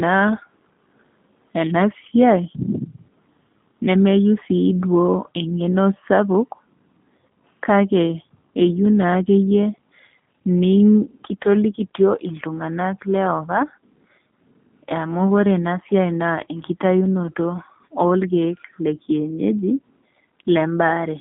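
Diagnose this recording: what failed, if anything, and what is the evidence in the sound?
The damage sits at the codec stage and runs through the whole recording: the speech has passed through a G.729 codec. Nothing reaches above about 3.6 kHz, and the usable band is roughly 150 Hz to 3.5 kHz, a telephone line response. The voice has a plainly audible rough, synthetic grain because the coder discards the waveform and rebuilds it from a vocal tract filter, a pitch predictor and a few pulses per frame. This points to an 8 kbit/s G.729A-style link.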